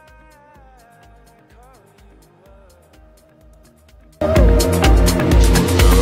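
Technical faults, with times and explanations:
0.00 to 4.21 s, one channel inverted: summed to mono, the sound drops by about 36 dB and turns into a faint ghost of itself. That's most likely one side's polarity flipped, so everything common to both channels cancels and only their small difference survives.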